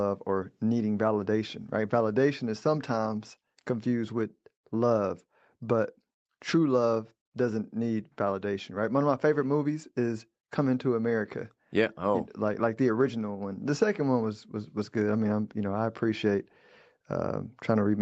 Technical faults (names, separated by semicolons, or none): none